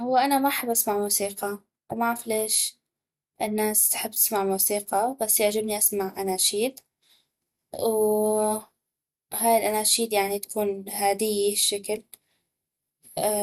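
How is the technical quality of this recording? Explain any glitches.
The technical quality is compromised by a compression fault that runs through the whole speech clip. It sounds like MP2 compression, likely at a low rate, which fits about 80 kbps. At that rate there are too few bits for every band. Upper bands get switched off and flicker back in. Remaining bands are coarsely quantised. The result is dull and muffled, with a gurgling, grainy distortion clinging to the speech.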